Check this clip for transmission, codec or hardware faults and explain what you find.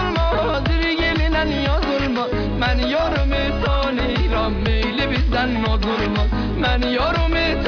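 No transmission, codec or hardware faults turn up anywhere in this clip.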